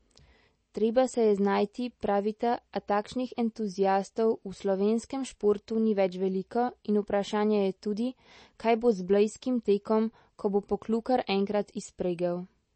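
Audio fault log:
Throughout: likely MP3 compression. Nothing is present above about 8.3 kHz, and the speech has a plainly audible watery, swirling quality with chirpy s sounds, as weak frequency lines drop in and out between frames, which fits a low bitrate around 32 kbps.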